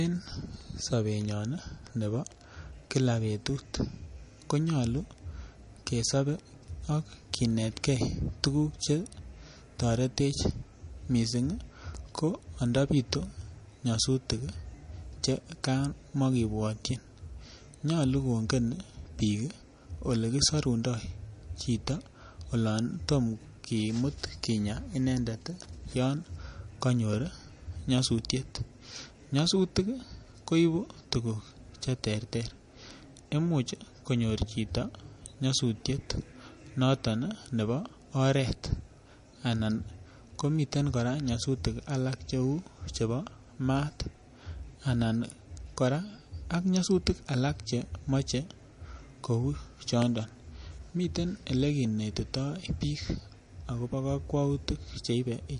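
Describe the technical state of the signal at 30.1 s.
At 30.1 s you're hearing MP3 compression artefacts, likely the cause, and they run through the whole clip. The treble stops dead around 10.6 kHz, and weak detail flickers in and out, giving a watery swirl and chirpy s sounds that point to a starved bitrate near 40 kbps.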